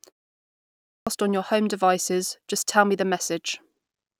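Speech with a clipped start after a pause: following roughly half a second of silence, the output path sleeps and takes 0.56 s to wake, so sound from 0.51 to 1.07 s is swallowed and speech resumes abruptly, missing its opening sounds.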